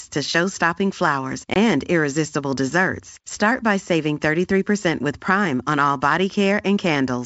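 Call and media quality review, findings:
Packet loss on an ADPCM call, 1.54–1.57 s: 20 ms hard-edged silent gap, about one packet. Unlike a clean dropout, audio resumes slightly distorted before settling, because the decoder's predictor and step size fell out of step with the sender's. G.722 wideband coding at 64 kbit/s is intact.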